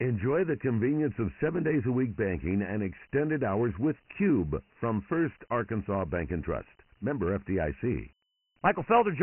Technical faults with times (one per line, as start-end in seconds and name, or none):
0.00-9.23 Dialogic VOX ADPCM